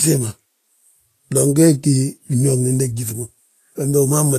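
Speech runs throughout with plainly audible codec damage, likely Vorbis compression at a low rate, which fits roughly 33 kbps. The treble is coded as grainy noise rather than fine detail, and a spectrogram shows a hard ceiling with nothing above 14.2 kHz and speckled texture beneath it.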